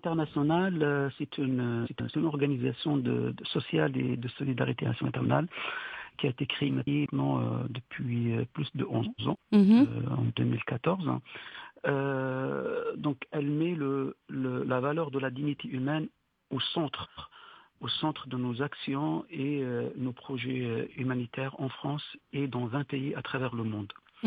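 Frames out of order: adjacent blocks of 139.3 ms or 185.8 ms (three or four frames each) were decoded swapped. Each stretch plays its halves exchanged, heard as a garbled flutter, at 1.85–2.14, 4.86–5.26, 6.68–7.06, 9.05–9.36 and 17.03–17.33 s.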